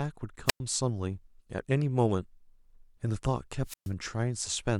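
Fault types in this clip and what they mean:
Wireless microphone squelch dropout: the FM radio link fades, hiss swells, then the receiver's squelch mutes the output, leaving near-silent holes of 0.10 s at 0.46 s and 0.13 s at 3.64 s. That rising-static lead-in distinguishes it from a clean digital packet-loss gap.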